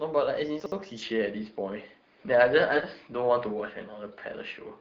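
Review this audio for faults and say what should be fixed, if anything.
Chunks out of order at 0.60 to 0.72 s: two adjacent 60 ms blocks play swapped, so the later one sounds first. Nothing is lost, but the sequence jumbles briefly at the hard joins. Reorder buffered chunks by sequence number before playback or writing.

From 1.02 s to the end, the sound turns duller, with nothing above 5 kHz, a level shift of a few decibels and a faint new noise floor, with no gap at the change. This is likely an input switched to a poorer device mid-recording. Lock the capture device for the session and stop automatic headset-profile switching.

AMR bit errors at 2.69 to 2.86 s: the speech keeps roughly its pitch and level but turns hoarse and gargly, which fits about eight AMR frames arriving with several percent of their weaker bits flipped while the core checksum still passed. The AMR-WB coding around it is at 12.65 kbit/s. 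Improve link quality or add stronger channel protection so corrupted frames are concealed rather than decoded.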